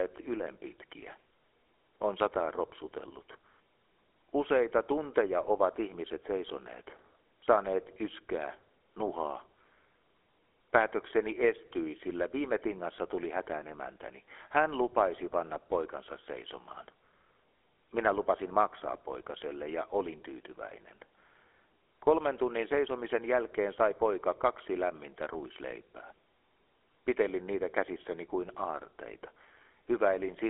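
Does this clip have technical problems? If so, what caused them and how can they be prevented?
Yes. GSM full-rate codec damage runs throughout: buzzy, gravelly roughness with nothing above 3.8 kHz, fitting a 13 kbps stream. That roughness separates it from clean telephone band-limiting. Record over a wideband or direct connection instead of a GSM call.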